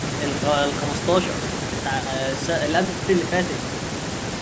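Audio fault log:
Throughout, the speech carries the normal marks of call microphone processing, with the lowest bass trimmed by its high-pass filter and no content above 8 kHz, and nothing in the signal departs from that.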